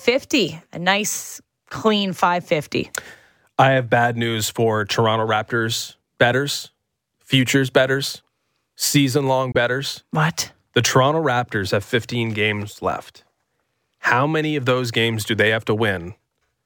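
Speech with a single Bluetooth dropout, likely caused by late packets, from 9.52 to 9.56 s just after "futures betters season long": a hole of about 23 ms, fitting one lost packet. Sound resumes as if it had kept playing, which sets it apart from a stall that picks up where it stopped.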